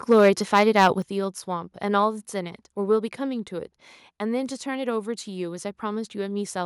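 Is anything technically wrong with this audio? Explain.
Yes, there are two problems. From 0.11 to 0.88 s there is microphone overload: the input level was likely set too high, driving peaks about 5 dB past the converter's ceiling. A few percent of samples get their tops sheared flat, giving the loudest syllables a harsh, crackly edge.

At 1.02 s the microphone volume is stepped down, likely the call software reacting to that clipping by cutting the device's input gain at once. Speech and background noise both drop abruptly by about 7 dB, an audible step rather than a gradual fade.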